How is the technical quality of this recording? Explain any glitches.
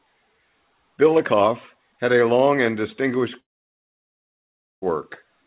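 The recording has one serious glitch: a gap in the speech from 3.4 to 4.84 s. It is heard through a narrow telephone-style band with nothing above 4 kHz, which fits a G.711 call codec at 64 kbps.

Long network dropout: the stream likely stopped arriving for about 1.42 s, leaving the receiver nothing to play. It stretched the last sound into a brief fading buzz or hiss, then held silence for about 1.39 s before speech resumed, with the lost stretch simply gone.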